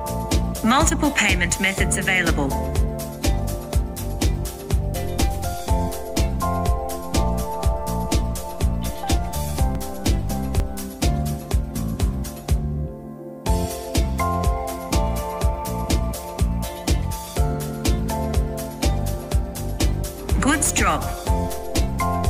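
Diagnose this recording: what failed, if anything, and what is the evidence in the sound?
Two brief jumps, at 9.75 s and 10.6 s, each a small forward skip in the sound with no silence between the joined sides, point to a likely dropped buffer (overrun) at the driver or buffer stage. Roughly 10 ms of audio goes missing each time because the capture block was overwritten before the software read it. Unlike a network or storage dropout, nothing is muted or filled in; the two edges of the audio are spliced directly, so the discontinuity itself is heard as the jump.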